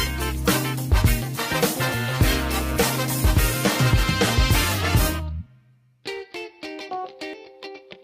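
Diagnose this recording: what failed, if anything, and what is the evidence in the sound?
Nothing in the signal chain has failed: the waveform stays continuous, and the audio keeps its full bandwidth without any interruption, distortion or added noise.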